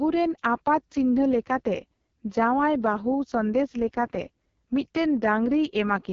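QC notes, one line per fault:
Throughout: AMR wideband (HD Voice) codec, heavily damaged. The speech is rough and raspy, with a buzzy, gritty texture from coarse pulse-driven modelling of the vocal tract, which fits the lowest 6.6 kbit/s mode. Unlike narrowband telephone coding, the band reaches past 3.4 kHz and stops near 7.3 kHz. The top sibilance above 6.4 kHz sounds like shaped hiss rather than true detail, which points to noise-filled band extension.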